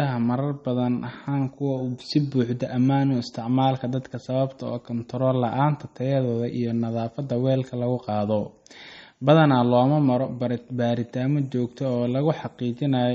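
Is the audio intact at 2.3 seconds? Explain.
No. At 2.3 seconds the speech carries MP3 compression damage, as it does throughout the clip. The sound is watery and swirly, and s sounds turn metallic. Nothing sits above 8.3 kHz, and a spectrogram would show a hard, flat ceiling there, with speckled holes in the upper bands where weak frequency lines flicker on and off from frame to frame. That starved encoding fits a bitrate around 32 kbps, the likely cause.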